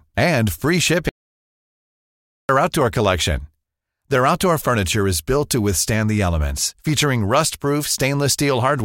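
At 1.09 s the speech cuts out abruptly into dead digital silence, with no room tone at all, and resumes mid-flow at 2.49 s, losing about 1.4 s. This audio dropout to silence most likely came from a lost input while recording continued writing zeros.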